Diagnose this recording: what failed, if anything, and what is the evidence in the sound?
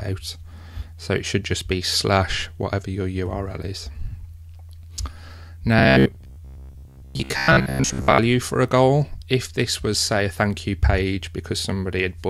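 At the driver or buffer stage, audio likely stopped arriving in time, so about 15 ms blocks were repeated while most of the real audio was skipped. From 5.79 to 8.19 s this gives robotic sound from repeated short buffers, a rigid, metallic buzz near 66.7 Hz.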